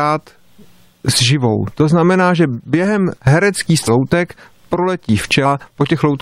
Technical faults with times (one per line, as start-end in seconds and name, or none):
3.87 compressed frames skipped
5.45 compressed frames skipped